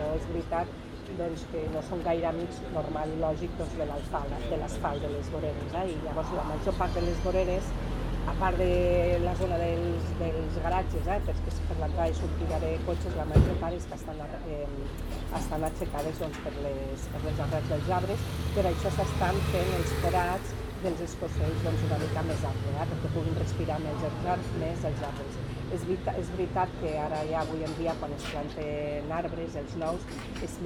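No technical faults can be heard anywhere in the recording.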